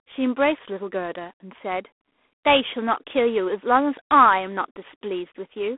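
From start to end, the speech carries G.726 ADPCM damage. Each sample is coded as a small difference from a prediction. Too few bits leave a harsh, rasping hiss that rises and falls with the speech, which fits 24 kbit/s. The band runs roughly 250 Hz to 3.5 kHz, with nothing above 3.8 kHz.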